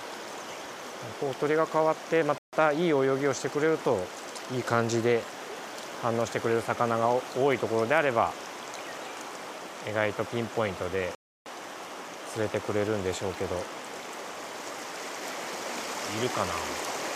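At 2.38 s the audio cuts to silence for about 150 ms, and at 11.15 s for about 310 ms, then resumes: a playback stall, likely buffer starvation or a blocked player thread.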